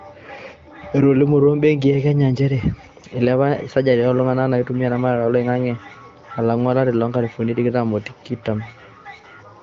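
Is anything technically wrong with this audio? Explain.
No, nothing is technically wrong with this audio.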